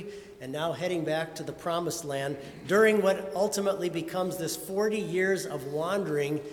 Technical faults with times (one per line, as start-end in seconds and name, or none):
none